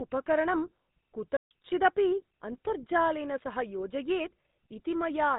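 From the start the whole clip carries a GSM full-rate codec sound: buzzy, gravelly roughness on the speech and nothing above about 4 kHz. That fits a 13 kbps coder rebuilding the vocal tract from sparse, regularly spaced pulses, which leaves the excitation coarse and grainy.

At 1.37 s there's a playback stall. The audio cuts out mid-flow for about 140 ms and resumes at 1.51 s. That's a clean gap in the output, most likely the player briefly running dry of data or getting blocked before it caught up.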